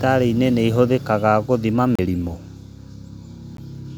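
A Bluetooth stall, likely, cuts the speech to silence from 1.95 to 1.99 s, right after "ihũthĩkaga gũthima", then again briefly at 3.57 s: delayed packets left the headphones' buffer empty, so playback paused for about 33 ms and 14 ms before resuming.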